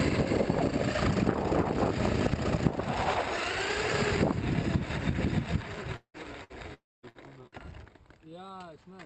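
Audio passed through an Opus call path with high frequencies cut off above about 8 kHz. Two long network dropouts, at 5.96–6.17 s and 6.74–7.06 s, likely from the connection stalling, each remove a stretch of audio, about 180 ms and 300 ms. In each, the last sound is stretched into a fading buzz or hiss before giving way to near-silence for about 90 ms and 230 ms. Bursts of packet loss at 6.44–6.53 s, 7.09–7.30 s and 7.47–7.55 s each drop about 60 ms. The receiver holds the preceding sound as a decaying buzz or hiss, and the audio resumes with that piece missing.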